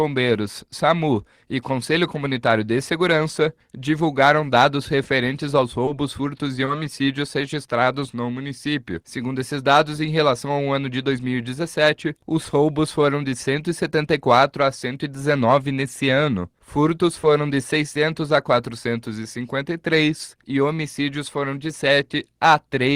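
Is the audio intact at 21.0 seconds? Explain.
Yes, at 21.0 seconds the audio is intact, with no dropout, click, distortion or other fault at that moment.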